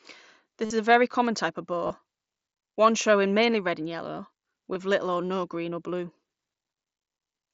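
Concealed Bluetooth headset packet loss hits at 0.65–0.70 s (about 52 ms), 1.87–1.90 s (30 ms) and 4.74 s. The receiver repeats the last short stretch of waveform, giving a level buzzy tone, seen as repeating periods and flat harmonic bands, with a slight warble on recovery.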